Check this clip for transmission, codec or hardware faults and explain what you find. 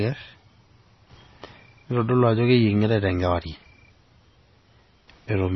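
There's one fault, and it runs through the whole speech clip: heavy MP3 compression, most likely. The top end stops dead around 5.9 kHz, which fits a starved bitrate near 24 kbps. With so few bits, the encoder drops the treble and flickers weak frequency detail on and off, so it sounds watery and swirly, with smeared attacks and chirpy s sounds.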